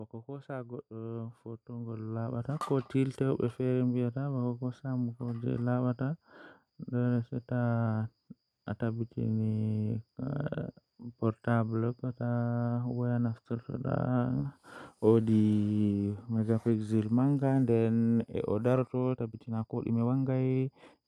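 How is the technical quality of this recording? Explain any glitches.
Two faults affect the recording: a slow level swell at the start and a rushed stretch at the end.

From 0.25 to 5.53 s there is automatic gain rising. The gain control judged the input too quiet and gradually raised its amplification by about 12 dB over those five seconds. The voice and the background noise swell together. A speaker simply talking louder would not lift the room noise too, and the slow, steady ramp rules out a sudden level jump.

From 18.69 s to the end at 21.07 s is a time-stretched section. The pace abruptly quickens to about 1.38 times normal while the pitch stays exactly where it was. This likely comes from software squeezing the audio to fit a length, dropping short slices to keep the pitch, which leaves the speech rushed. A plain speed-up would have raised the pitch, and this section does not.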